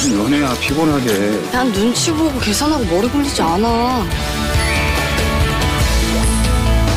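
From 4.22 s to 6.92 s a GSM phone buzz sits under the sound: a hard, raspy tone at about 217 Hz, rich in harmonics and unrelated to the material. A nearby 2G handset on a call is bursting steadily, and the audio circuitry rectifies those pulses, leaving the buzz about 21 dB below the signal.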